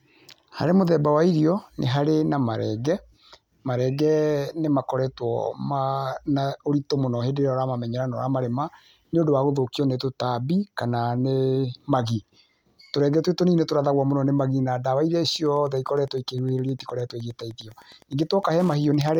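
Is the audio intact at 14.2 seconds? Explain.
Yes, the audio is intact at 14.2 seconds, with no audible fault at that moment.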